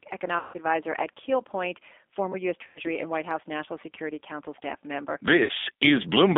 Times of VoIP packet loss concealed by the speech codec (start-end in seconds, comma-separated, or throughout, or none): 0.39-0.58, 2.67-2.80, 5.43-5.52